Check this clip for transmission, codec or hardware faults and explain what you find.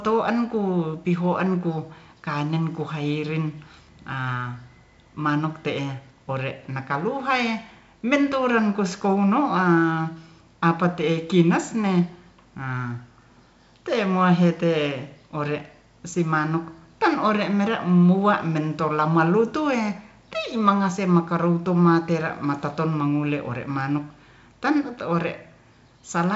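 No faults turn up in the speech, which carries the sound of G.722 wideband telephone coding, most likely its 56 kbit/s mode, with content reaching up to 7.7 kHz and nothing above, and only the light hiss and faint graininess that this coding leaves behind.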